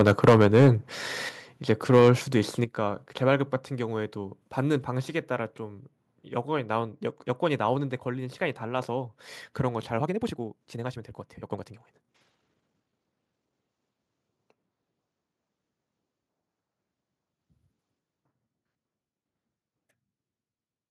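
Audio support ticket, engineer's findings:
Harsh, crackling edge on loudest syllables, 0.00–0.69 s and 1.70–2.10 s. Likely microphone overload: input about 10 dB, then about 5 dB, past converter ceiling, a few percent of samples flattened.

Sudden level drops, voice and background together, at 0.29 s (about 2 dB), 1.29 s and 2.64 s (about 7 dB each). Microphone volume stepped down, likely by call software reacting to clipping.

Rushed delivery, pitch unchanged, 9.97–13.55 s. Likely a time-stretched section: audio squeezed to about 1.54x speed, short pieces dropped to hold pitch.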